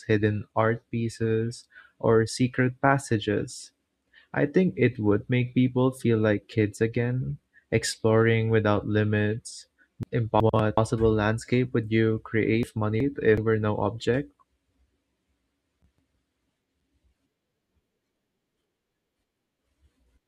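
Right after "again exploring without limits", from 10.03 to 10.77 s, the chunks play out of order, and it happens again from 12.63 to 13.38 s just after "landscape would you". In each spot a roughly 0.37 s chunk lands one slot late, so two chunks swap places. Nothing's missing, but the sound jumbles for a moment across the three hard joins.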